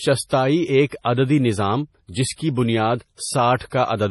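From start to end the speech shows heavy MP3 compression artefacts: nothing above 11.5 kHz, with a watery, swirling texture and smeared attacks, likely from a low bitrate near 32 kbps.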